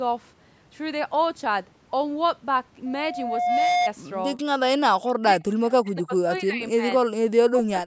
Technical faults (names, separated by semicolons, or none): speech suppressed in double talk